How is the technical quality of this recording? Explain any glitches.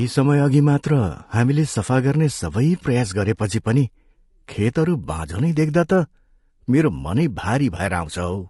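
Compression damage is plainly audible across the whole speech clip. It sounds like low-delay AAC compression, likely AAC-ELD at a rate near 32 kbps. Its short frames resolve voice harmonics poorly. The voice turns rough and grainy, with noise between harmonics and a thin, artificial top band.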